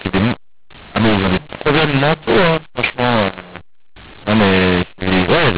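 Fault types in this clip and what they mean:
mu-law and A-law mixed up: harsh, gritty distortion with scrambled loudness and noise filling the pauses throughout, because speech coded as A-law is decoded as mu-law.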